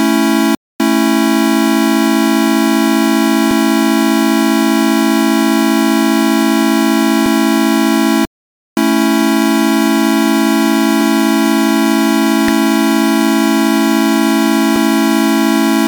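At 3.51 s, 7.26 s and 14.76 s the audio jumps forward with no gap, each time skipping roughly a third of a second of sound. The two sides of each skip are butted directly together. This is audio missing between chunks. The likely cause is a recorder or processor working in 4-second blocks that drops a short stretch each time it closes one block and starts the next, which explains the regular spacing.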